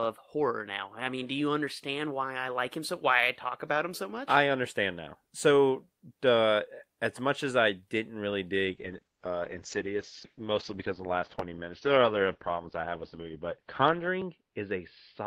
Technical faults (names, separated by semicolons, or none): call bitrate drop